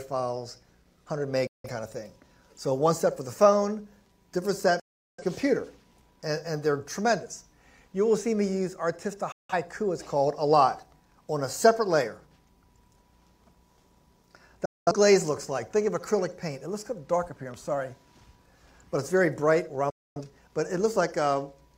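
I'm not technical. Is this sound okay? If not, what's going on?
No. The receiver had a digital broadcast dropout: it lost the signal and muted until it recovered. At 1.47, 4.80, 9.32, 14.65 and 19.90 seconds, the sound cuts abruptly to silence for a fifth to two-fifths of a second, and whatever played then is gone.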